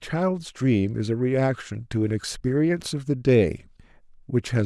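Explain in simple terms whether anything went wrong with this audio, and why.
Nothing went wrong here: the speech signal comes through intact, with no interruptions, distortion or other technical problems anywhere in the recording.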